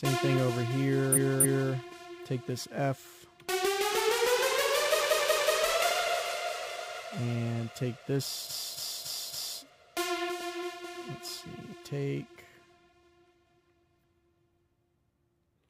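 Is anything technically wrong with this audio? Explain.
Yes: repeated frames at 1.12–1.68 s, 4.97–5.53 s and 8.46–9.58 s. The same compressed block, 0.28 s, 0.19 s and 0.28 s respectively, plays two, three and four extra times. This gives a looping stutter with no silence between repeats, which sets it apart from a dropout.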